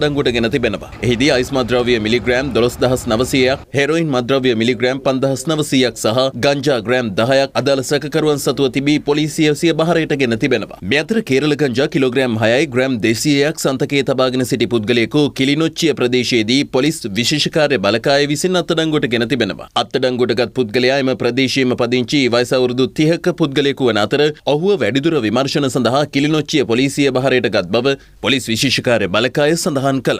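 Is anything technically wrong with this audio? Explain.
No, nothing technically wrong stands out here; the audio just sounds the way it should the whole way.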